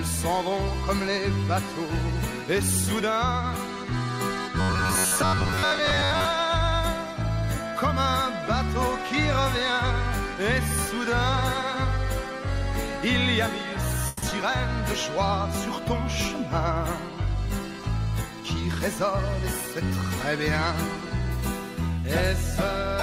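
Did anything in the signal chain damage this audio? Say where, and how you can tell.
Yes. Robotic sound from repeated short buffers, 4.61 to 6.25 s, at the driver or buffer stage. The audio turns into a rigid, metallic buzz locked at about 93.8 Hz, while its overall contour still moves underneath. The likely cause is a capture or playback buffer arriving too late, with the software looping the last chunk instead of waiting. A period of 1/93.8 Hz fits a repeat of about 10.7 ms, and most of that stretch seems to be repeated material rather than new audio.

Call audio freeze, 14.07 to 14.24 s, in the network path. For 150 ms the last sound is held and stretched as a decaying continuation, with no true silence. Afterwards the audio resumes exactly where it stopped, so nothing is lost, but everything after it now runs about 150 ms later. That pattern points to packets that were likely held up in transit long enough for the jitter buffer to run dry.

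Short concealed packet loss at 14.30 to 14.33 s and again at 14.41 to 14.44 s, also at the network stage. Each is a brief smear or wobble where about 20 ms of real audio never arrives. The decoder bridges the hole with roughly 10 ms of synthesised continuation and then crossfades back into the real signal, so the joins sound blurred and not like clean dropouts.

Call bitrate drop, 14.94 to 21.74 s, at the codec. The sound becomes rougher and more watery as the encoder falls from 64 kbps to 25 kbps, staying at the lowest rate for about 5.3 s before recovering. The bandwidth estimate fell, so the encoder had far fewer bits to spend and quantised the spectrum more coarsely. You can hear the texture degrade and then clear again near 21.7 s.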